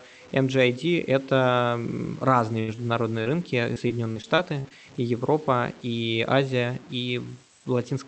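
From the start, the speech carries grainy distortion that follows its level, with quiet stretches gritty and sputtering rather than hissing. This is likely low bit depth without dither. Plain truncation leaves an error only about 25 dB below the signal, fitting roughly a 7-bit word.

From 2.39 to 4.72 s comes repeated packet loss, with robotic sound. About ten short holes, the longest 81 ms, are each patched by stretching the previous sound, giving choppy stutters that stop and start, unlike the steady grain running through the whole clip.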